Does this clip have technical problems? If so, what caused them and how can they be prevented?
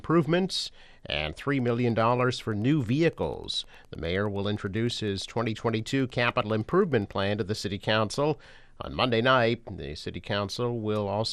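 Yes. MP2 compression damage runs through the whole clip: the sound is dull and carries a gurgling, granular distortion. The likely cause is MPEG Layer II encoding at too low a bitrate, around 80 kbps. The encoder divides the signal into 32 sub-bands and, short of bits, shuts off upper bands and quantises the rest coarsely, so treble flickers in and out. Encoding at a higher bitrate, or with a more efficient codec, would prevent it.

Wi-Fi interference appears from 1.51 s to 7.32 s as a steady ticking repeating every 102.4 ms, about ten times a second, sitting faint at roughly 40 dB below the signal. A nearby Wi-Fi radio's beacon bursts are being picked up and rectified by the audio circuitry, turning each transmission into a click. Keeping Wi-Fi devices away from the audio gear and using shielded, well-grounded cabling would prevent it.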